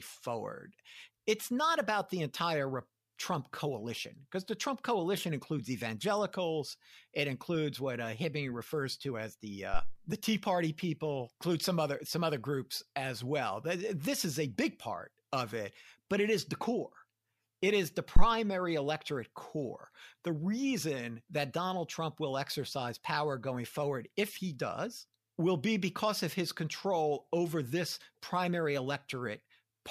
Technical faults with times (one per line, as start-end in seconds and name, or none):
9.74-9.94 phantom power thump
18.16-18.27 phantom power thump